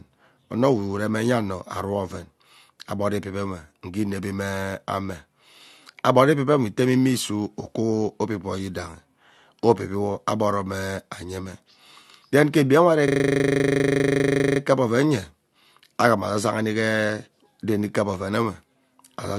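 Speech, with a system hang loop from 13.08 to 14.6 s, after "ke egbi enwe ari". One 40 ms piece repeats 38 times at 25 Hz, giving a rattling buzz. The machine froze while the hardware replayed its buffer. Speech resumes at "kep oven".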